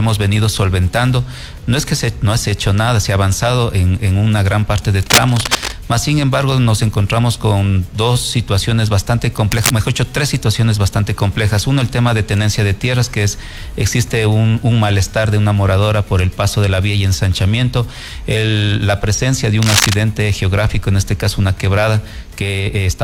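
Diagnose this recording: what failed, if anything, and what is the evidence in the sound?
Cable scratch noise in the analogue wiring: scratchy bursts near signal level at 4.98–5.74, 9.51–9.71 and 19.62–19.95 s, likely a flaky contact being jostled.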